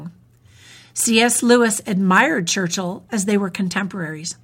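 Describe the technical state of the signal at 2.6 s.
At 2.6 s the speech signal is intact, with no technical fault audible at that moment.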